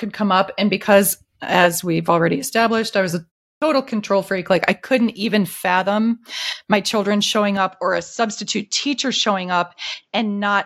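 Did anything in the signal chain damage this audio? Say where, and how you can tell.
Yes. At 3.57 s, after a 0.34 s pause following "established I was a", the onset of "control freak" is clipped, with about 47 ms missing. This is a clipped start after a pause. The playback device slept through the gap and woke too late for the first sounds.

From 7.57 s to the end, right after "fathom my children showing", the input switched to a poorer device, likely at the driver level. Nothing above 7.6 kHz survives, and a faint new noise floor appears. The level stays steady and there is no gap at the switch, but the tone turns duller.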